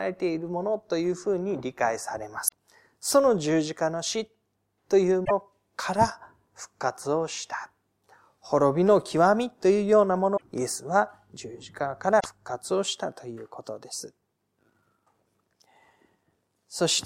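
Damaged data in a compressed stream makes the decoder misread frames, lose sync and hunt for the next frame header. The speech breaks into a short chirp or squawk, about 0.1 s each, at 2.44–2.54 s, 5.21–5.31 s, 10.33–10.43 s and 12.16–12.26 s.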